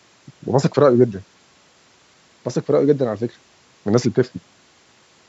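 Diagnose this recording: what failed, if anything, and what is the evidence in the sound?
Nothing in the speech points to a failure at any stage: the bandwidth stops at 8 kHz with the lowest bass trimmed, as the call's microphone processing intends, and the room's background noise sits about 42 dB below the speech.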